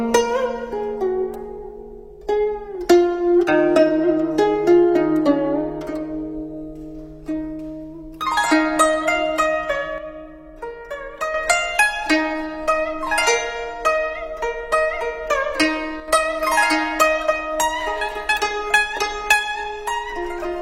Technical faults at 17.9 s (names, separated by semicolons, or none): none